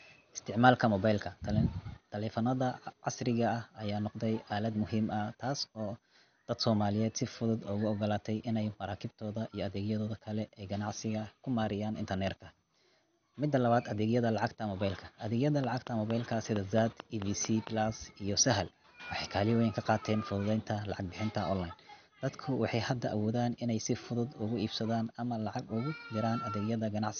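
Throughout, the speech sounds dull and granular, with gurgling distortion and nothing above 6.5 kHz, likely MP2 compression at a rate near 48 kbps.

From 15.64 to 17.68 s, a train of clicks (about ten regular pops at 4.4 per second) sits roughly 10 dB above the speech, likely interference.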